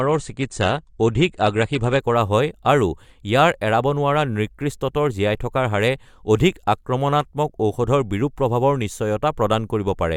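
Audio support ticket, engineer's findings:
Dull, band-limited speech with stronger codec artefacts from 0.0 to 2.0 s; nothing above 9.7 kHz. Clean step up to fuller treble at 2.0 s, no gap. Component: adaptive streaming player. Adaptive stream starting at a low bitrate, consistent with AAC-LC around 32 kbit/s, switching to roughly 96 kbit/s once throughput was measured.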